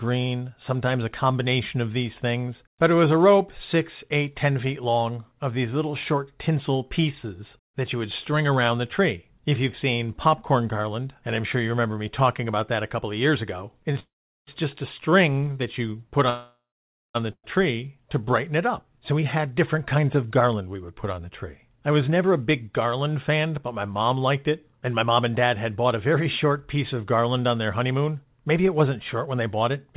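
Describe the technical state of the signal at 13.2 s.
At 13.2 s the speech is intact with no fault, carried through the call path's G.711 coding, which leaves nothing above 4 kHz.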